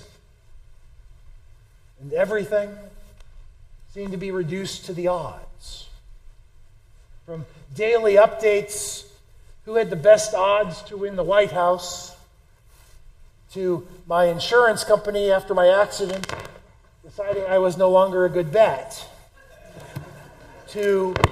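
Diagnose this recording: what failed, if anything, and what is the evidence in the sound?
Nothing in the signal chain shows a failure: level, continuity and timing stay steady throughout, and no stage from capture to playback leaves an audible mark on the sound.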